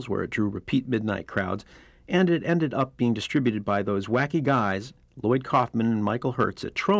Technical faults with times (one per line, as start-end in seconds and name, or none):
none